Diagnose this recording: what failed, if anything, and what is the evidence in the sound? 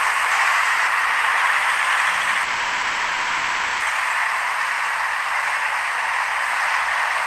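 From 2.43 s to 3.83 s the sound stalls. The last moment stretches into a fading buzz or hiss for about 1.4 s, then resumes where it left off with nothing skipped. This is a call audio freeze, likely from network packets held up long enough for the jitter buffer to run empty, adding about 1.4 s of delay.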